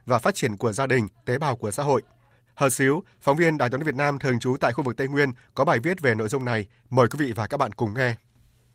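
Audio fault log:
No fault is heard in this speech clip.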